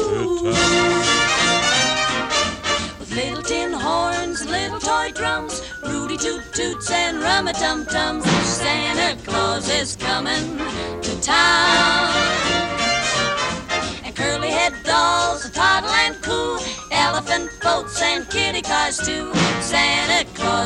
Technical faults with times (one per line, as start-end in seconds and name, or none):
none